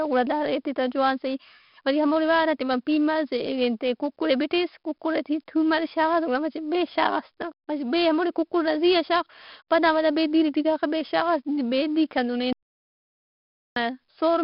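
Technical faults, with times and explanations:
Throughout, 4-bit ADPCM compression: each sample is coded as a coarse 4-bit step from a prediction, so heavy gritty hiss rises and falls with the speech and roughens sharp onsets, consistent with about 44 kbps. A spectrogram shows noise filling between harmonics, with nothing above 5.3 kHz.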